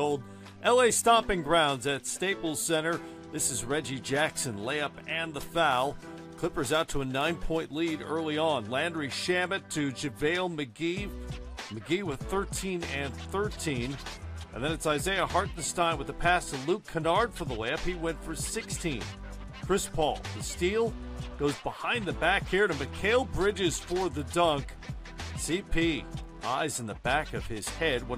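From 5.71 to 7.79 s, crude rate conversion: samples were dropped or repeated by nearest-neighbour picking with no filtering, in a pattern that fits a 48 kHz to 44.1 kHz change. The resulting error, roughly 25 dB below the signal, adds a gritty, inharmonic fizz that tracks loud and high sounds.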